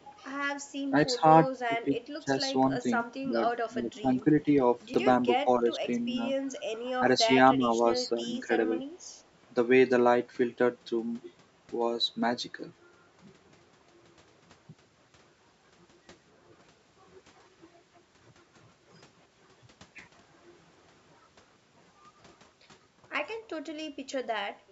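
Right at the start, 0.0 to 0.05 s, there's a faint delayed copy of the speech sitting about 40 dB down, likely an echo leak from a loudspeaker echo canceller letting a 280 ms echo slip through. From 0.88 to 4.47 s the talker dips in patches, roughly a second in total and up to around 15 dB deep, which sounds like speech suppressed in double talk, the canceller ducking everything while both sides overlap. At 4.94 s a tiny chunk, about 5 ms long, plays one slot late, so those chunks come out of order, leaving a quick jumbled instant. The same double-talk ducking returns at 5.44 to 6.17 s and 6.99 to 8.5 s, shallower at around 10 dB, with about 300 and 500 ms affected. Then at 23.82 to 23.95 s the room tone briefly sinks about 16 dB, background gated by the echo canceller clamping the mic for roughly a tenth of a second before letting go.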